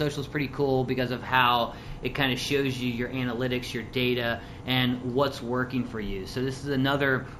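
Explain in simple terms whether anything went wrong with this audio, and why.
Yes, something's off: imaging from linear upsampling, all the way through. The top end sounds dulled, with a faint metallic shimmer on the bright, hissy parts, sitting between about 8 and 16 kHz. That fits audio raised from 16 kHz to 48 kHz by just joining the dots between samples.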